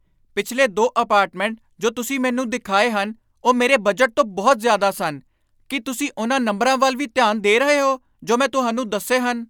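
No technical faults can be heard anywhere in this recording. Nothing in the speech stands out as a problem at any point.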